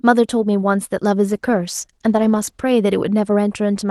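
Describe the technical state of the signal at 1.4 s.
Call bitrate drop, 1.26 to 2.81 s: the encoder falls from 32 to 13 kbps, coding the speech more coarsely, so it sounds rougher and degraded.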